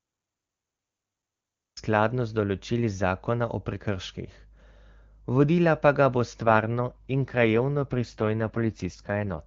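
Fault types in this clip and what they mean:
Cut-off start: the audio begins late, from digital silence straight into the middle of a sound with no attack or fade, until about 1.77 s, just before "skladno z določili". Unlike a dropout, nothing precedes it; the opening simply is not there.
AMR rate drop: from about 6.40 s, right after "vodila pa ga bo", to 9.43 s the speech turns rougher and more synthetic as the AMR-WB coding falls from 23.85 to 8.85 kbit/s. The bandwidth stays the same and nothing goes silent, which separates it from a band switch or packet loss.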